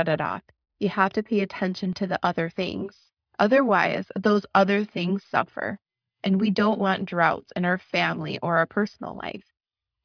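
Speech recording with no technical faults to report. Nothing in the signal calls for a time or a cause.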